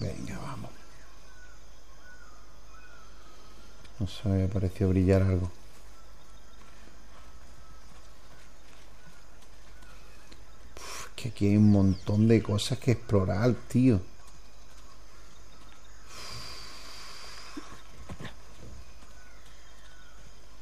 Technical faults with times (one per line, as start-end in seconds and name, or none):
none